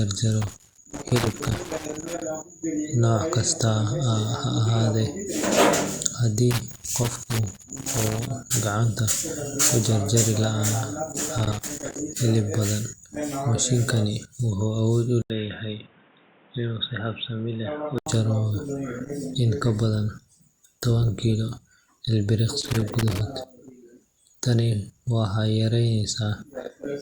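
Loose connector crackle breaks into this speech recording at 0.42–2.22 s, 6.51–8.31 s, 11.26–11.99 s and 22.60–23.21 s. In each case a worn or dirty contact keeps making and breaking, chopping the signal into irregular bursts of scratchy crackle. From 15.22 to 18.06 s the input sounds switched to a poorer device, likely another microphone or a headset profile. After a gap of about 80 ms the sound turns dull and boxy, with nothing above 3.8 kHz. The level is a few decibels lower, and a new noise floor sits roughly 30 dB beneath it. From 19.53 to 21.53 s the quality drops abruptly and without any gap, the mark of an adaptive stream at a lower bitrate. Codec artefacts rise, which fits a step down from 64 to 32 kbit/s Opus while the connection slowed.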